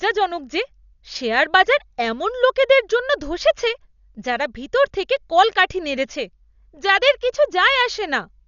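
Speech clip, band-limited throughout with nothing above 6.9 kHz and heavy rough, fluttering noise around the voice, likely from Dolby Digital compression at a low bitrate near 48 kbps.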